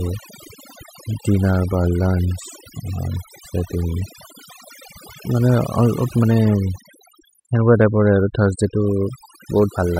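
A noise reduction stage set too aggressively runs throughout, cutting frequency bands near its noise estimate: overdone noise removal leaves twinkling near-silence between phrases.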